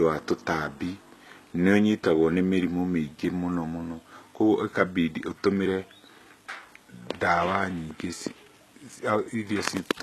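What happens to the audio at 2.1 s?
At 2.1 s there's the same HE-AAC compression heard throughout: nothing above 12.3 kHz, with treble likely rebuilt from copied lower bands, so sibilants sound gritty and metallic.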